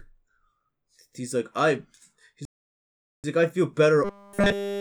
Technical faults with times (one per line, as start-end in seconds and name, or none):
2.45-3.24 playback stall
4.04-4.80 robotic sound from repeated short buffers